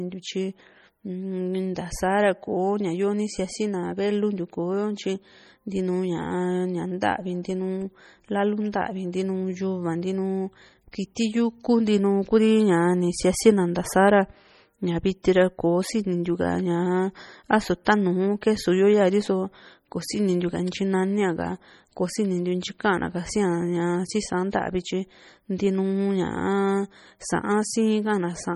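Throughout the speech the sound is watery and swirling, with metallic chirps on s sounds and smeared attacks. The damage is heavy. This is likely MP3 compression at a starved bitrate, around 32 kbps, where weak frequency lines drop in and out frame to frame.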